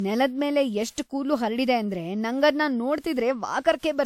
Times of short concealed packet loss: none

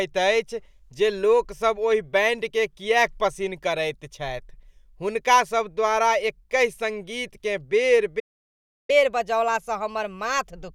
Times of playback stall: 8.19-8.90

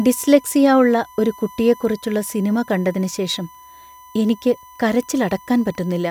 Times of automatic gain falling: none

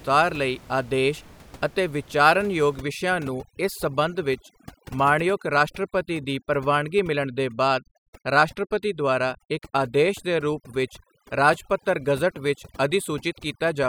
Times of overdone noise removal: 2.78-13.88

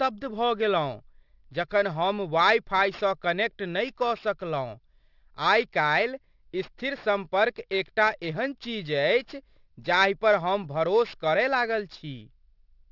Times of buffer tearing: none

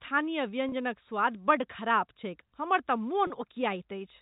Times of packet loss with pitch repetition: 0.69-0.72, 3.27-3.30

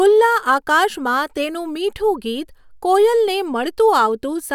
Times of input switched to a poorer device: none

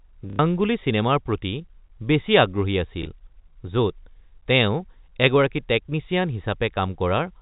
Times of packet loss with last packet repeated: 0.30-0.39, 3.03-3.06

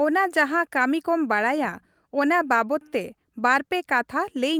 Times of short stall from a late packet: none

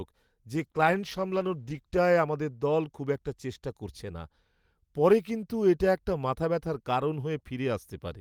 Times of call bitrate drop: 0.56-2.05

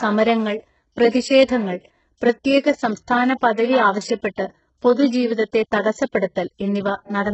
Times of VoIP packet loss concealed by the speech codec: none

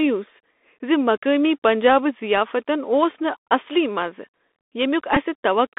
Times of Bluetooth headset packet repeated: 5.15-5.17

